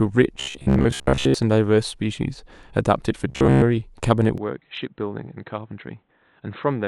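From 0.40 to 1.34 s, and again from 3.29 to 3.62 s, the speech turns into a rigid, metallic buzz pitched at 66.7 Hz. This robotic sound is likely from repeated short buffers: with audio arriving too seldom, roughly 15 ms slices get replayed in place of most of the real signal. On a spectrogram these stretches show evenly spaced vertical striations every 15 ms and a comb of harmonics at multiples of 66.7 Hz, while the waveform shows identical cycles repeating.

At 4.38 s, with no gap, the sound abruptly goes dull and boxy and stays that way to the end. The likely cause is the input switching to a poorer device. The band narrows, the level drops by about 10 dB, and a faint new background noise appears well below the speech. A spectrogram shows the upper frequencies cut away from that moment on, and the waveform's envelope visibly shrinks at the switch point.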